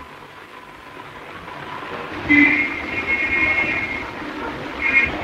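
Compressed frames were skipped twice, at 1.45 s and 4.01 s: about seven frames each time, which fits frames roughly 26 ms long, were missing or rejected by the decoder. The audio jumps ahead by around 150 ms at each point, with an audible join where playback resumes.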